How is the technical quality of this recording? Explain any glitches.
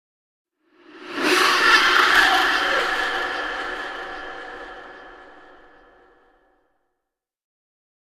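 No glitches are audible anywhere in the recording; its technical quality holds steady throughout.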